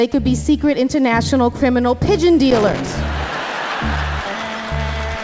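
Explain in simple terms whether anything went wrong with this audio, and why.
Between 2.51 and 2.95 s there is a loose connector crackle: a worn or dirty contact rapidly connecting and disconnecting, chopping the sound into an irregular, scratchy burst. Unlike a digital glitch, which tends to be clean and evenly spaced, this crackle is ragged and uneven.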